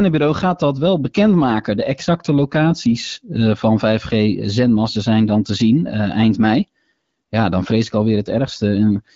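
No technical faults can be heard in this recording. It carries the bandwidth of an AMR wideband (HD Voice) codec, with only light coding character, which fits its 12.65 kbit/s mode.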